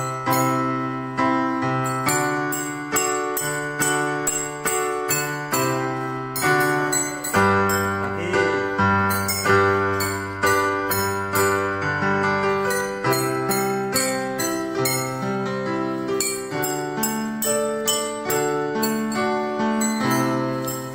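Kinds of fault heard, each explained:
Wi-Fi interference: the audio circuit rectifies a nearby Wi-Fi radio's beacon, sent every 102.4 ms, adding ticks about ten times a second throughout, about 40 dB down.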